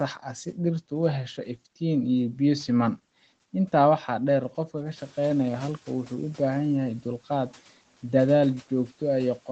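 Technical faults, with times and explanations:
4.96–6.14 s: noise suppressor catching up. The room noise jumps by about 12 dB near 5 s and the suppressor's noise estimate trails behind, so the background passes with less reduction at first, then sinks by about 8 dB over 1.18 s as the estimate adapts.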